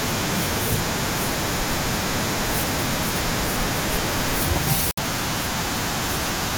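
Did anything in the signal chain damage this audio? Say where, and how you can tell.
Yes. At 4.91 s the speech cuts abruptly to silence and returns at 4.98 s, leaving a hole of about 70 ms with nothing filled in. This is a digital broadcast dropout at the reception and decoding stage. The receiver stopped getting frames that passed their checksum and muted its output until valid data resumed. The roughly 64 ms of lost programme is consistent with two consecutive frames of about 32 ms each.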